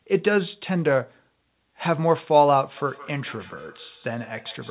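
Feedback echo between two devices runs from 2.77 s to the end: a second nearby device replays the sound, the microphone recaptures it, and repeats arrive about every 150 ms, about 24 dB below the speech.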